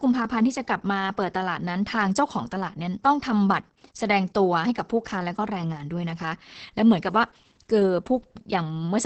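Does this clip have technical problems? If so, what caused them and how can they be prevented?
Yes. Opus voice compression runs throughout: the speech is muffled, hoarse and faintly robotic, with nothing above about 8.5 kHz, which points to the SILK speech coder in wideband mode at roughly 10 kbps, quantising its excitation coarsely. Prevent it by encoding at a higher bitrate, around 24 kbps or more.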